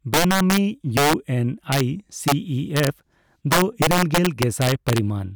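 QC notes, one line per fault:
0.14–0.58 s, integer overflow: peaks driven about 6 dB past full scale wrap to the opposite sign, cracking harshly; the waveform shows spikes jumping rail to rail, with broadband vertical streaks.
0.97–1.13 s, integer overflow: about 4 dB overdrive flips the loudest peaks across the full range, giving sharp cracks; the waveform shows sudden sign reversals and the spectrogram shows bright full-band slashes.
1.72–1.80 s, integer overflow: with about 2 dB overdrive only the top peaks wrap, producing brief snaps; the waveform shows isolated rail-to-rail jumps and the spectrogram shows thin broadband lines.
2.28–2.32 s, integer overflow: about 2 dB over the limit, the top peaks wrap instead of limiting, giving a short crack; the waveform shows a sign flip and the spectrogram a narrow vertical streak.
2.77–2.87 s, integer overflow: about 2 dB overdrive wraps the highest peaks to the opposite extreme, causing brief crackle; the waveform shows scattered full-range jumps and the spectrogram shows broadband ticks.
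3.52–4.98 s, integer overflow: a long stretch about 5 dB over full scale wraps repeatedly, giving sustained violent crackling far harsher than clipping; the waveform shows dense rail-to-rail flips, the spectrogram dense full-band striping.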